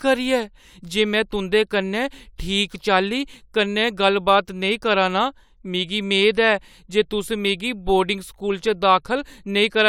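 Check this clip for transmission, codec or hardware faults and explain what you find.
Nothing wrong can be heard anywhere in this speech.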